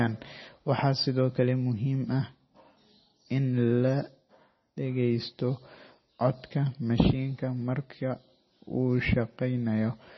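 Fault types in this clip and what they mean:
MP3 compression: heavy watery, swirly smearing with nothing above 5.9 kHz, likely from MP3 encoding at a low bitrate around 24 kbps.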